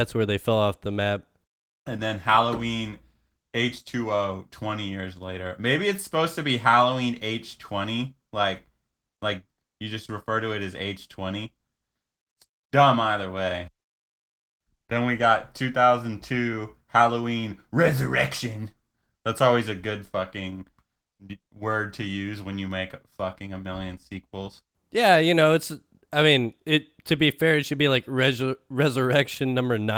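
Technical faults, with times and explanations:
Nothing stood out on listening to this speech, which comes through with the light coding character of Opus voice compression running in its hybrid mode.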